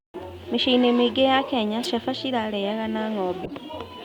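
A corrupt frame was decoded twice: damaged bits in a couple of compressed frames at 1.81 to 1.87 s, then several frames at 3.44 to 3.53 s, were played anyway. Misread gains scatter energy into wrong frequencies, giving brief chirpy noise bursts peaking around -15 dBFS.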